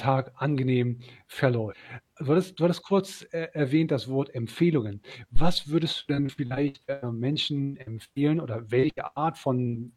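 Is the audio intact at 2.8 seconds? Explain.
Yes, the audio is intact at 2.8 s, with no dropout, click, distortion or other fault at that moment.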